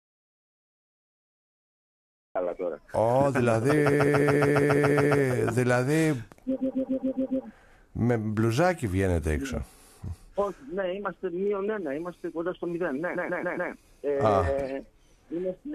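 Right from the top, the clip is already in a dropout to silence that lasts until about 2.35 s. It's dead silence with no room tone at all, and then the sound comes back in mid-flow. That points to the input likely being lost for a moment, through a disconnected device, a broken link or a stray mute, while the recorder kept writing silence. Whatever happened during that stretch is simply gone.

Then come three bursts of repeated frames, where the same short block of about 139 ms gets played over and over. That block length fits a run of roughly six compressed frames being written or sent more than once. You hear it as a stutter. The first burst runs from 3.93 to 5.18 s with nine extra plays, adding about 1.25 s. The second, from 6.60 to 7.43 s, has six repeats and adds about 0.84 s. The last, from 13.14 to 13.70 s, has four repeats and adds about 0.56 s.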